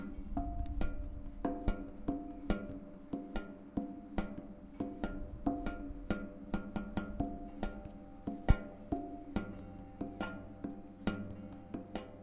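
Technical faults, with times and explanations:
No technical faults can be heard in this recording of sounds: the signal holds steady, with no breaks, level problems or added disturbances at any point.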